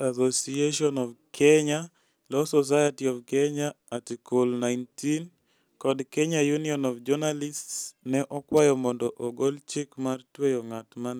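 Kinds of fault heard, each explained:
Electrical switching spike: a sharp snap at 8.57 s, lasting about 19 milliseconds, sits on top of the speech just before "mondo ogol chik mar" and peaks at roughly -20 dBFS. It has no connection to the speech around it. The likely cause is a nearby switch, motor or static discharge making a brief arc that the audio line picked up as an abrupt burst of electrical interference.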